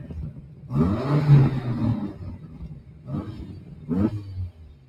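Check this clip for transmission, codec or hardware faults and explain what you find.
A speech-oriented noise suppressor is acting on the whole clip and causing audible faults.

Throughout, the level pumps and flutters, with held sounds and tails thinning while attacks mostly get through. This is a noise suppressor applied to music or sounds: it treats steady content and ambience as noise, swinging its gain by roughly 15 dB.

At 0.35–0.69 s, 2.38–3.08 s, 3.53–3.89 s and from 4.52 s to the end, sustained sound sinks by about 5 dB and decays cut short. This is sound cut by the noise suppressor, which judged these stretches to be noise and turned them down.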